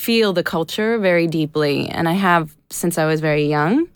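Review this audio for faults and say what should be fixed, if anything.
No faults can be heard anywhere in this speech recording. Nothing needs to be fixed.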